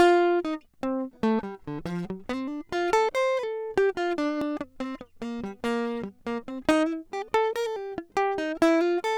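At 4.42 s the music jumps forward with no gap. This is a dropped buffer, an overrun. The likely cause is the recording program falling behind, so the hardware wrote new samples over a block it had not yet collected. That block is lost, and the audio on either side is spliced straight together. Only about 10 ms is missing. The join is heard as a jump in the sound.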